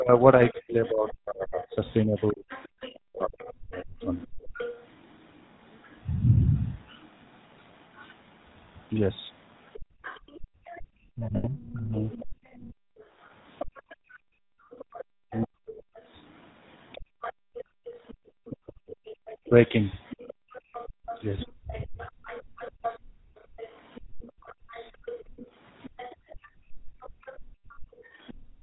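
Throughout, the GSM full-rate codec encodes the speech by modelling the vocal tract and driving it with sparse, evenly spaced excitation pulses, at a rate that fits 13 kbps. Because the codec's bandwidth stops at 4 kHz, the band is cut there. The damage is plainly audible as a coarse, buzzy graininess.

From 0.0 to 4.05 s the echo canceller apparently faced both sides talking at once. Unable to tell the local talker from the loudspeaker echo, it likely turned everything down, producing speech suppressed in double talk. The voice sinks by as much as roughly 40 dB and breaks into gaps totalling about two seconds. The same suppression returns from 11.16 to 12.03 s, shallower at around 15 dB. It is deep again across 15.25 to 22.01 s, about 1.5 s in all, and there is a brief dip between 27.13 and 28.08 s.

From 0.19 to 28.34 s the other side's voice leaks through. The talker's device likely plays the other side on a loudspeaker, and its sound reaches the microphone without being fully cancelled. 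That second voice sits roughly 20 dB under the main speech.

The background is gated by the echo canceller from 4.33 to 4.53 s. While the loudspeaker played, the canceller clamped the microphone, and the room tone collapses by about 36 dB for 0.2 s before returning. From 9.8 s to the end this gating happens again and again, up to about 39 dB deep, with dropouts adding up to roughly five seconds.

At 11.36 s, in the middle of the second suppression, 80 ms of GSM frames are lost, which fits four consecutive 20 ms frames. The decoder repeats the last good frame's parameters, and the result is a short, rough, metallic ringing instead of real speech. A single lost frame between 20.22 and 20.28 s gives a brief burst of the same metallic hold.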